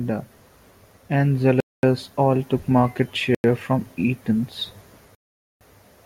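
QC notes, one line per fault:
1.60–1.83 s, 3.35–3.44 s, 5.15–5.61 s, Bluetooth stall: the speech cuts abruptly to full silence three times, for 228 ms, 92 ms and 458 ms, then resumes. This is likely a wireless link briefly starved by interference, so the headphones' buffer emptied while lost packets were resent. Unlike packet-loss concealment, there is no smeared or buzzy filler, and unlike a noise gate, nothing fades. The audio simply stops, then carries on.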